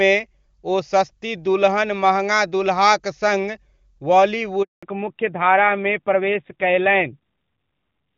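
At 4.63 s a handover gap appears: while the call switched networks, no speech frames got through for 200 ms. The speech cuts out within a few tens of milliseconds and stays silent until 4.83 s, so anything said in that stretch is lost.

From 4.83 s to the end, a fallback to narrowband follows: the link dropped out of HD Voice, where the wideband codec had sounded clear, into an older narrowband codec. Nothing above 4 kHz survives, and the speech turns duller and rougher, which fits a low rate around 7.4 kbit/s.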